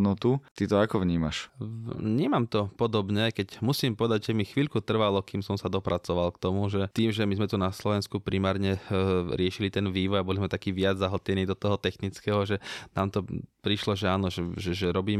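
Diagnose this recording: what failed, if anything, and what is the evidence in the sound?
Nothing in this speech recording points to a failure at any stage of the chain. No audible event gives evidence of a problem in the wiring, conversion, processing, transmission, storage or playback.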